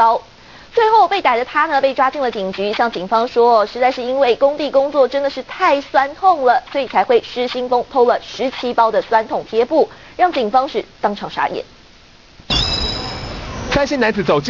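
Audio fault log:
throughout, aliasing: content above 6 kHz folds back below that edge as gritty, metallic tones at unrelated pitches, roughly 15 dB under the main signal. This fits a rate drop from 48 kHz to 12 kHz made without an anti-aliasing filter first.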